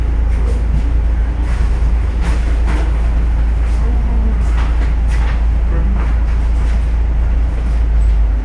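From start to finish, everything runs slow and sits low: the audio plays at about 0.69 times its proper speed, and its pitch is pulled down by about 6.5 semitones, so events stretch out and take on a heavy, sagging quality. This is a wrong sample rate fault. The samples are being played back slower than they were captured, with no rate conversion, so timing and pitch drop together by the same ratio. That ratio fits a 32 kHz recording replayed at 22 kHz.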